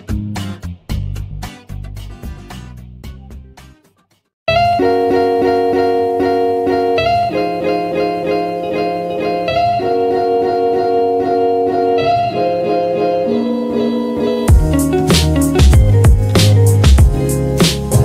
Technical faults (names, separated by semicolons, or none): none